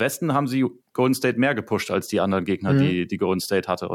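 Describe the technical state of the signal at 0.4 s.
At 0.4 s the speech plays through cleanly, with no dropout, distortion, clipping or other fault audible at that point.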